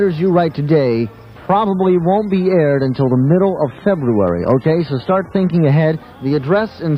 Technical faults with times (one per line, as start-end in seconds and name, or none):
1.69-5.69 adaptive stream at a lower bitrate